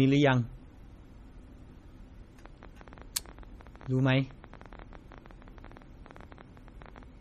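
Throughout, the speech was likely squeezed by MP3 compression at a low bitrate, near 32 kbps, stripping everything above 13.9 kHz and leaving plainly audible watery, swirling artefacts. From 2.46 to 7.04 s, pulses likely intrude from outside the audio path, a train of clicks at about 13.8 per second, unevenly spaced, some seventy ticks as loud as the speech.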